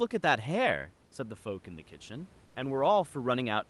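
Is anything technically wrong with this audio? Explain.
Yes. Comfort noise replaces the background from 2.45 to 2.55 s, a stretch of about 100 ms. The call codec's discontinuous transmission likely paused sending during this gap in the speech, so the receiver filled it with generated noise roughly matched to the room background, which sits about 34 dB below the speech. The real background gives way to a flat, featureless hiss about 3 dB quieter, a brief dip in texture before the sound resumes.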